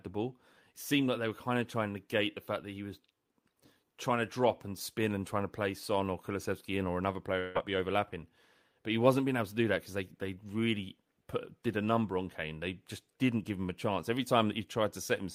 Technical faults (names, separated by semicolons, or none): long network dropout